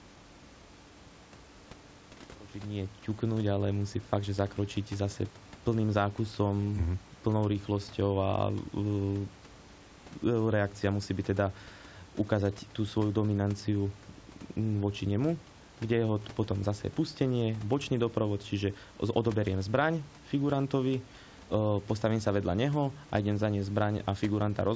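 Nothing's gone wrong here: it's a stretch of speech with no technical faults to point to.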